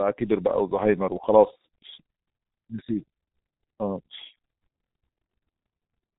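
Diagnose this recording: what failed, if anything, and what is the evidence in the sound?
The failure is at the codec stage: G.723.1 coding throughout the speech. The band stops hard at 3.8 kHz, so the speech sounds muffled from start to finish. Damage is heavy. Voicing sounds hoarse and consonants blur into each other. The codec models the voice in coarse 30 ms frames and updates that model slowly, so fast detail is smeared. The thinness points to a very low rate, near 6 kbit/s.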